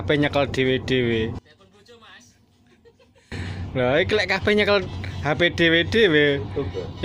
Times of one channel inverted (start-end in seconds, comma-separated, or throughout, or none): 1.39-3.32